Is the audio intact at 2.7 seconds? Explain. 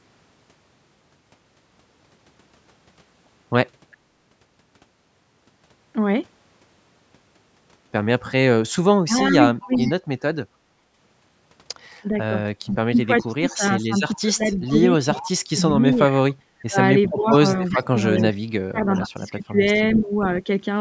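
Yes, the speech at 2.7 seconds is intact, with nothing there beyond the ordinary call microphone processing.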